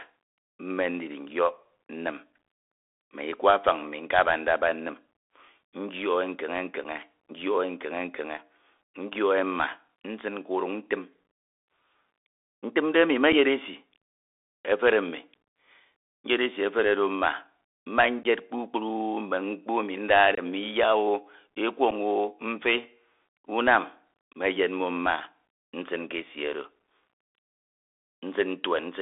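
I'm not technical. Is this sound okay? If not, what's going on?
No. The whole recording went through the Bluetooth CVSD headset codec, the basic call mode of a wireless headset. It keeps only roughly 300 Hz to 3.6 kHz, so the speech sounds thin and muffled, with scratchy s sounds and a grainy hiss underneath.

There is also unconcealed Bluetooth headset packet loss. A few milliseconds of sound went missing between headset and phone and nothing filled the gaps. Brief holes or clicks occur at 6.84 s, 13.32 s and 21.91 s (7.5 ms each), 18.23–18.26 s (15 ms) and 20.35–20.39 s (22.5 ms), each about one to three packets.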